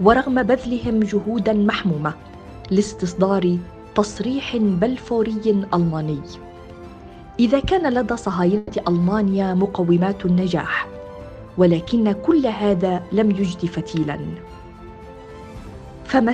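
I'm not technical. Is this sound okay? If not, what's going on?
No. At about 8.57 to 8.71 s, a burst of packet loss: about 120 ms never arrived, so the last sound is stretched and fades instead of going silent, then skips ahead.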